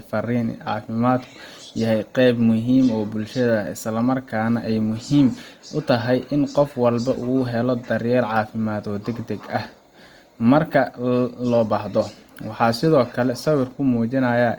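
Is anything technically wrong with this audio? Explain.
Yes. Throughout the clip the speech carries plainly audible Opus compression damage, likely from encoding in the music (CELT) mode at a low rate, with a texture that fits roughly 24 kbps. The bandwidth stays full, reaching up to about 20.1 kHz. With too few bits, the encoder keeps each band's energy but fills its detail by folding lower bands or adding noise, so the voice sounds grainy, rough and noisy rather than swirly or hollow.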